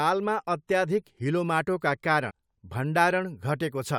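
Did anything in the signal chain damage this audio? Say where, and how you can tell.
Yes. A brief glitch breaks the speech from 2.29 to 2.31 s, just after "अत्याधिक हिलोमाटोका". That points to damaged data in a compressed stream at the codec or storage stage: corrupted bytes threw the decoder out of sync until it found the next frame header.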